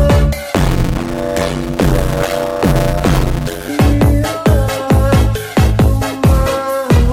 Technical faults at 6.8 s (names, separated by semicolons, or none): none